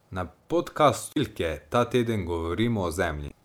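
At 0.51 s there is a DC step in this speech recording: the waveform's zero line abruptly jumps to a new offset, as happens when a converter recalibrates or an offset-carrying input is switched in. The sudden shift registers as a brief low thump, while the speech continues unaffected. The offset does not hold; it bleeds away as if through a high-pass filter near 2 Hz, so the baseline settles back within a fraction of a second.

Damaged data in a compressed stream follows, first from 1.11 to 1.17 s and again from 3.27 to 3.32 s. In both spans the encoded frames are corrupt, so the decoder misreads them, loses frame sync and has to hunt for the next valid header. For roughly 60 ms and then 40 ms, the result is a short garbled chirp or squawk replacing the intended audio.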